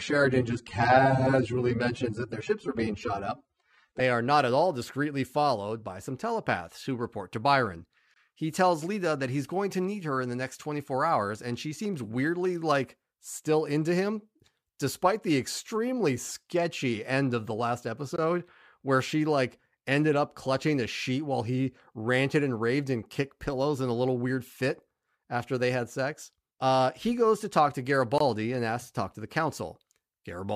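For the first 4 seconds the speech sounds dull, with missing or synthetic treble and stronger codec artefacts, then sharpens abruptly with no break. This is an adaptive stream starting at a low bitrate. The player began on a thin version, which sounds like roughly 24 kbit/s AAC, and switched to a richer one, nearer 96 kbit/s, once it had gauged the connection.

At 8.14, 18.16 and 28.18 seconds the sound drops out for about 21 ms each time, in short holes. These are gaps between chunks. The audio was delivered in 10-second pieces, and a sliver of silence sits at each join, interrupting the flow without losing any sound.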